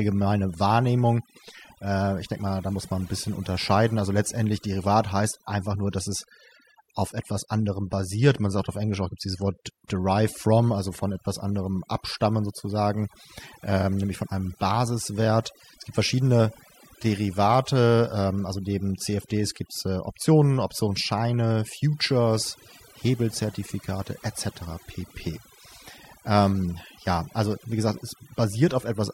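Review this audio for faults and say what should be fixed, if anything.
Across the whole clip, the gaps between phrases fall to near silence speckled with twinkling artefacts. This is overdone noise removal: the noise reduction was pushed so hard that any frequency band sitting close to its noise estimate gets pulled down or switched off, taking quiet parts of the voice along with the noise. To prevent it, use gentler reduction depth and accept some residual background noise.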